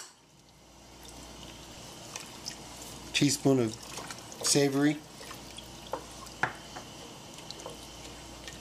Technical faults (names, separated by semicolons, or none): repeated buffer